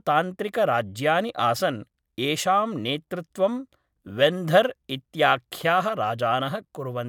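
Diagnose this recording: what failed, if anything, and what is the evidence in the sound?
Nothing failed in this recording, and the sound gives no evidence of any fault at any stage.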